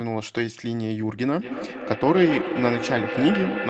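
From 1.36 s to the end, feedback echo between two devices: each phrase comes back roughly every fifth of a second, thinner and ringing, peaking about 7 dB below the speech.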